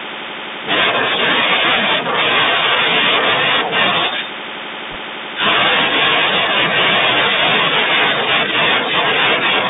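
From start to finish the speech has gone through a Bluetooth CVSD headset codec, and the damage is plainly audible. Everything sits in a narrow band from about 150 Hz up to 3.7 kHz, so it's thin and boxy. The one-bit slope coding, which fits a 64 kbps link, can't keep up with loud, bright moments, so those smear and distort, s sounds come out scratchy, and there's a grainy hiss running underneath.

Then, from 4.91 to 4.96 s, there are bit errors on the Bluetooth voice link: a short, rushing crackle lasting about 50 ms. Flipped bits in CVSD each nudge the waveform only slightly and the error fades quickly, so you get a burst of gritty noise rather than sharp clicks. An error rate of around one or two percent, hitting a run of consecutive frames, fits what you hear.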